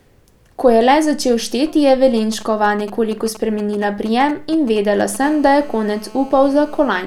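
GSM signalling bursts, from 2.17 to 5.16 s, begin right after "le začel šteti je". A 2G handset close to the recording chain is exchanging brief control transmissions, and some part of the audio circuit demodulates the radio pulses like a crude diode detector. The result is a galloping dit-dit-dit of short raspy buzzes pulsing at 217 Hz, sitting roughly 15 dB below the speech and breaking up in irregular clusters.

GSM phone buzz runs from 5.23 to 7.02 s, once the handset has moved into an active call. It now transmits continuously, one burst every TDMA frame at 217 Hz, and the rectified pulse train produces a hard, steady buzz with a dense stack of harmonics above that fundamental. It sits about 24 dB below the speech, quieter than the earlier bursts but unbroken, and it has no connection to what is being said.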